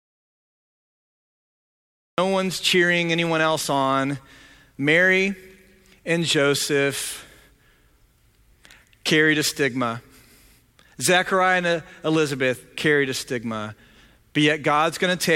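From the very start until 2.18 s the speech clip holds an audio dropout to silence, already under way when the clip begins, so the sound enters abruptly mid-flow with "one's cheering anyone else". The gap is silent with no room tone or hiss, which sets it apart from a quiet pause or a fade-in. The likely cause is a lost input, such as a disconnected device or a mute, while recording continued writing silence.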